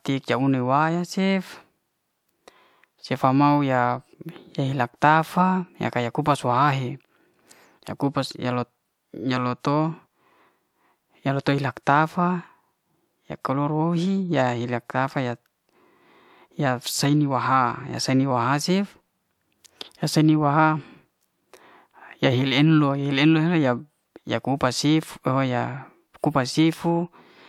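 No technical faults can be heard at any point in this recording.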